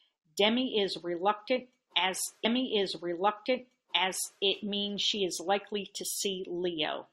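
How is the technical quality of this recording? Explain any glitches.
The recording has one clear glitch, a stream segment repeated. From 2.44 s to 4.42 s, about 1.98 s of speech plays a second time. The player fetched or queued the same chunk twice, so playback jumps back with a brief blip and replays the passage intact. Unlike a buffer stutter, which loops tiny fragments rapidly, this repeats a long, coherent stretch once.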